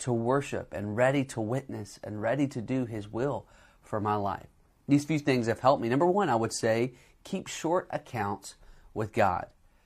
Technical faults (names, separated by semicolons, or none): none